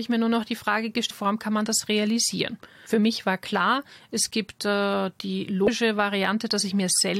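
Short glitches interrupt the speech at 1.09 to 1.11 s, at 2.86 s after "kann man das realisieren", and at 5.67 s after "klar es gibt äh". This is damaged data in a compressed stream: corrupted frames make the decoder lose sync and search for the next frame header.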